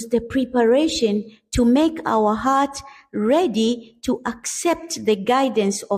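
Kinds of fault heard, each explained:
No faults turn up anywhere in this one, so there's nothing to list here.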